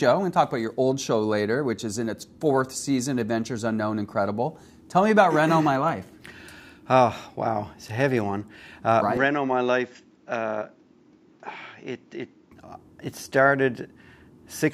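From 9.17 to 12.52 s the input likely switched to a poorer device, cutting everything above 7.6 kHz: the sound turns duller and slightly quieter, with faint new background noise, then clears.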